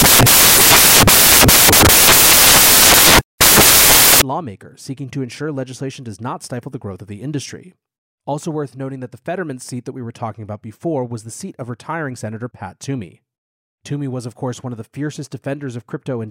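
From the start to 4.22 s the reader assembles each sample from the wrong bytes, whether offset by one, swapped in order or misaligned, so the rapidly varying low-order bits land in the most significant position. The result is samples built from the wrong bytes: the speech comes with loud, harsh broadband noise, close to white on the loud sounds. Clean speech returns just before "lawmaker seeking to ensure".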